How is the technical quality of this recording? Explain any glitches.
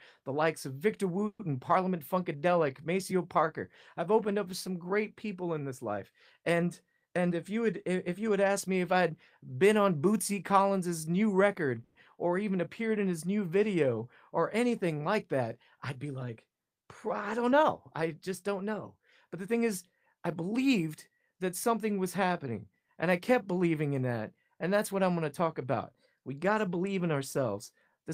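The speech has two brief stalls and two stretches that run noticeably fast.

The call audio freezes come at 1.27 to 1.42 s and 11.84 to 11.98 s. In each, the sound stops moving forward and the last moment is stretched into a fading buzz. The first stall drops into about 50 ms of silence before resuming. The likely cause is packets held up in transit, so the jitter buffer ran empty. The receiver padded about 120 ms and then 110 ms. When the audio resumes, it picks up exactly where it stopped, with nothing lost, only delayed.

The jitter buffer speed-ups run from 7.07 to 8.29 s, at 109% speed, and from 18.02 to 19.55 s, at 107%. The speech sounds hurried while the pitch stays the same. Each time, the buffer held more than it aims for. To cut the extra delay, the receiver removed many tiny pitch-period slices, roughly a tenth of a second in total each time.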